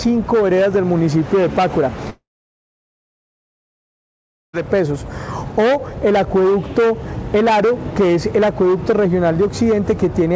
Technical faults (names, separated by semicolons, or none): long network dropout